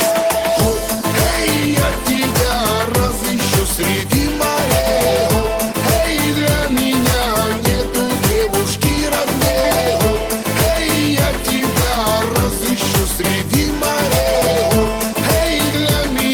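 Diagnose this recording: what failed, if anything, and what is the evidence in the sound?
Nothing failed: no stage in the chain, from capture through to playback, leaves an audible fault anywhere in this recording.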